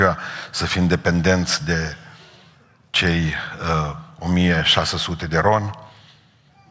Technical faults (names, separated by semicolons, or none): none